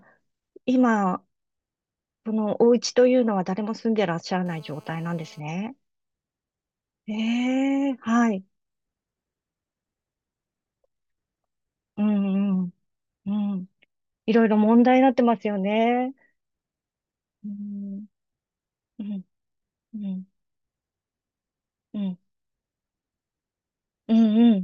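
From 4.46 to 5.40 s comes GSM phone buzz. A nearby 2G phone on a call sends bursts 217 times a second, which the audio circuit rectifies. The steady, raspy 217 Hz buzz sits about 32 dB below the speech and is rich in harmonics, unlike smooth 50 or 60 Hz mains hum.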